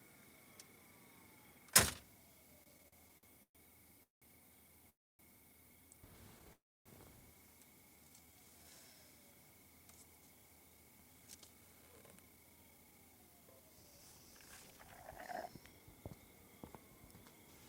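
Repeated stalls (stutter) run from 2.63 to 4.25 s: ten short gaps, the longest 186 ms, as the jitter buffer kept emptying and the receiver stretched the last sound, so the audio drags without losing anything.

Call audio freezes follow at 4.90 to 5.22 s and 6.53 to 6.89 s, each about 0.3 s and mostly silent. Packets were likely held up, emptying the buffer before the audio resumed where it stopped.

A jitter buffer slow-down at 7.96 to 8.94 s plays at 82% speed, adding 182 ms by repeating pitch periods, so sounds are drawn out at unchanged pitch.

A jitter buffer speed-up from 10.21 to 15.8 s runs at 114% speed, trimming roughly 0.7 s in small pieces to cut excess delay, so the audio sounds hurried.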